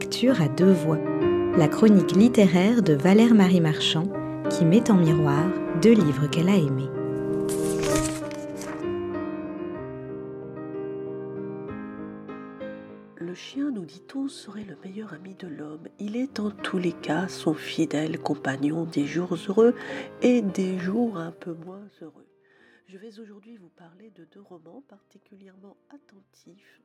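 Zipper noise appears at 7.96 to 8.3 s, 15.98 to 16.54 s and 20.9 to 22.32 s. The level moves in unsmoothed 1 dB steps. Each step clicks. A rapid ticking rides on the sound as the level falls, rises, then falls further.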